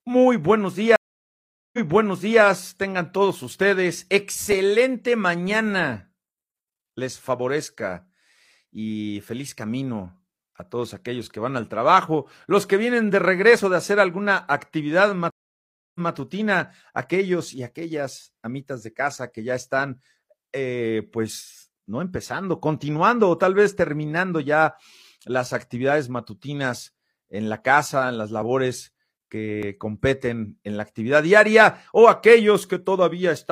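It's a speech clip with two stream reconnects: one from 0.96 to 2.42 s with 0.77 s of silence, then the audio picks up about 0.68 s earlier; again after "de hacer alguna actividad" at 15.30 s, with 0.65 s of silence and a 0.17 s repeat. At 29.63 s, just before "competen en la actividad", there's a small jump forward, likely a dropped buffer (overrun) losing roughly 20 ms.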